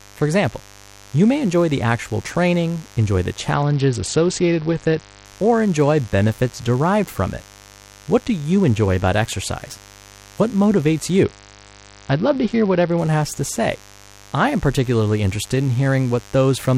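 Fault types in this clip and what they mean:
Mains buzz: A steady, raspy 50 Hz buzz with harmonics runs under the whole speech, sitting roughly 25 dB below it. Switching spikes from the mains supply cause it.
Bluetooth SBC bit pool drop: Twice the link's bit pool falls to 8, near 66 kbps. This happens after "actual training enjoy the" and before "has to say I". The treble dulls and grit rises.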